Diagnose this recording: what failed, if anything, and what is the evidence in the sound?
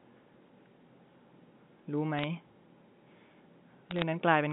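The digital transmission path failed with bit errors on a digital phone line. Brief bursts of sharp ticks and crackle sit over the G.711 telephone coding, which passes 150 Hz to 3.6 kHz, at 2.18 to 2.24 s and 3.91 to 4.02 s. Flipped bits corrupt single samples, at roughly a fifth of a percent.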